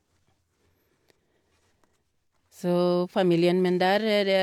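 No technical faults occur at any point in the recording.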